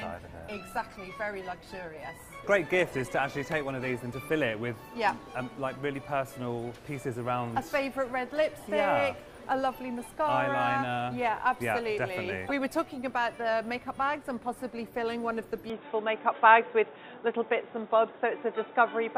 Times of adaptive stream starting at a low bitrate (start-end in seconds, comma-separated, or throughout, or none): 0.00-4.00